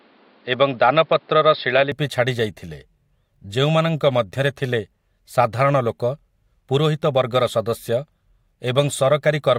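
From 0.0 to 1.92 s, the speech sounds narrow and dull. Nothing is present above about 5.2 kHz, so the top of the sound is missing. A faint background noise sits well below the speech, roughly 35 dB down. At 1.92 s the full band returns at once, with no gap and no real jump in level. This is likely an input switched to a poorer device, with the recording moving back to the better microphone at that moment.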